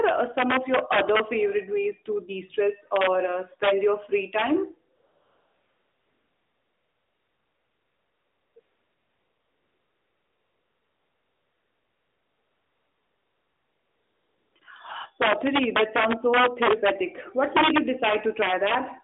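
Sharp, violent cracks break through the loud speech peaks at 2.96 to 3.07 s, 3.64 to 3.71 s and 4.39 to 4.42 s. This is integer overflow: peaks only about 1 to 4 dB past the limit wrap to the opposite sign instead of being held, so each crack is harsher than clipping.

From 4.96 to 8.56 s and 8.60 to 14.56 s, with a brief switch again at 14.6 s, the real background gives way to a smooth, steady hiss that cuts in and out. This is AMR comfort noise: the phone stopped sending speech frames and the receiver filled the gap with synthetic noise. The audio stays confined to roughly 250 Hz to 3.6 kHz throughout, which fits the narrowband mobile codec.

Integer overflow returns more heavily at 15.22 to 16.90 s and 17.44 to 18.75 s. With peaks about 6 dB over the limit, it produces longer stretches of repeated cracks as sustained loud passages repeatedly wrap across the full range.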